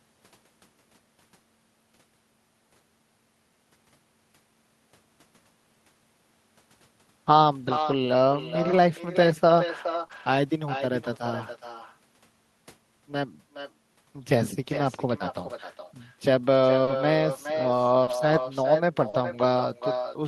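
Echo with no canceller runs through the whole recording. The far end's loudspeaker feeds its microphone, and nothing removes that path, so every phrase returns around 0.4 s later as a thinner copy about 8 dB below the speech.

Lost packets rebuilt from error correction appear at 7.63 to 7.97 s, 8.63 to 8.77 s, 9.99 to 10.05 s and 10.11 to 10.25 s. Low-bitrate backup copies carried in later packets stand in for the missing audio, covering 180, 80, 40 and 80 ms. There is no gap, but those moments turn rougher and noisier.

Short concealed packet loss falls between 10.07 and 10.11 s, squeezed between the rebuilt stretches. About 20 ms never arrived, and the decoder extended the preceding sound to cover it. This leaves a brief smear or wobble.

Scattered short gaps run from 15.47 to 19.23 s. Roughly three separate holes, the longest near 40 ms, are patched by continuing the last sound. They touch only a small share of that span and come through as isolated hiccups and smears.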